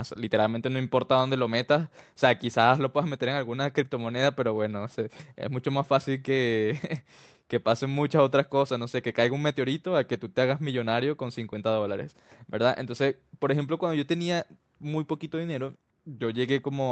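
Clock drift between sender and receiver runs throughout the speech: the sending clock is about four percent fast, so the receiver's jitter buffer keeps overfilling. Repeated timing corrections follow from 0.05 s to 16.80 s. The receiver trims short pieces to keep pace, effectively playing at 104 percent; if audible at all, this comes across as slight, unevenly spaced hiccups in the tempo.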